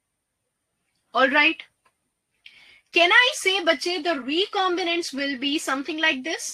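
No technical faults are audible anywhere in the recording.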